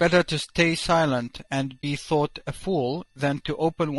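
A short speech recording carries plainly audible low-delay AAC compression throughout: the voice sounds rough and grainy, with a hiss-like texture between the harmonics and a thin, somewhat artificial top end. This is likely low-delay AAC-ELD coding at a bitrate around 32 kbps. Coarse quantization at this low bitrate leaves noise between the voice's harmonics, so on a spectrogram the gaps between the harmonic stripes are filled with speckled noise, and the upper band shows blocky, patchy energy. There is also an AAC frame loss with muting from 1.81 to 1.84 s. About 20 ms of audio drops to silence, which fits a single lost frame whose spectrum the decoder zeroed. The overlapping windows fade the sound out and back in, so the gap has soft edges. On the waveform it appears as a brief tapered dip to near zero, and on the spectrogram as a narrow vertical blank strip across all frequencies.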